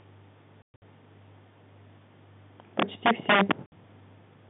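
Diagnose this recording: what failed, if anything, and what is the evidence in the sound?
Packet loss filled with silence is a network-stage fault. Between 0.62 and 0.82 s the speech is chopped by dead holes totalling 180 ms, the longest run 120 ms. A further 60 ms gap falls at 3.66 to 3.72 s. The gap lengths fit 20 ms packets. Unlike concealment, which smears or repeats sound, these holes are plain silence with hard edges.

Integer overflow occurs in a gain or sample-format stage. From 2.80 to 3.52 s the signal is driven about 13 dB past full scale, and instead of being limited, each peak wraps to the opposite sign and flips across the whole range. The result is violent, sharp cracks on the loud parts. Ordinary clipping would sound like a flattened, buzzy distortion, so the crack gives this fault away. All of this sits inside the narrow 150 Hz to 3.6 kHz telephone band of the G.711 line.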